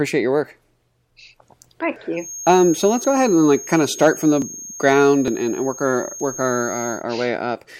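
At 1.96 s the speech jumps forward, roughly 70 ms missing and no gap, likely a dropped buffer (overrun) where samples were overwritten before being read. From 2.13 s to 7.06 s a thin, steady feedback whistle near 6.5 kHz sits about 15 dB under the speech, swelling and fading slowly in level. This is likely a speaker-to-microphone loop held just short of runaway. Further overrun skips occur at 3.04 s (about 70 ms lost), then at 4.42, 5.28 and 6.2 s, each losing a shorter slice of around 20 ms.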